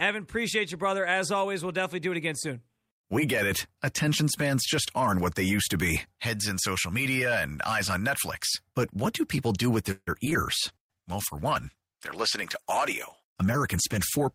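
Repeated packet loss (robotic sound) runs from 9.91 to 10.36 s in this speech recording. Four holes open in quick succession, the longest about 156 ms. About 190 ms is patched by stretching the previous sound and 60 ms simply drops out, so roughly 42% of that stretch is concealed, giving a choppy texture with pieces missing. A call bitrate drop begins at 10.69 s and lasts to the end, about 3.6 s at its lowest. The coarser, rougher and duller sound points to the encoder falling from around 40 kbps to 14 kbps, with less precise coding and the top end trimmed away. A jitter buffer slow-down follows from 10.79 to 11.03 s. The receiver repeats single pitch cycles to rebuild its reserve, adding 41 ms, so the speech plays at 86% speed with its pitch unchanged and sounds drawn out. A jitter buffer speed-up from 13.76 to 14.19 s does the reverse. Short pitch-period pieces totalling about 50 ms are cut to shed excess delay, so the speech hurries along at 111% speed at the same pitch.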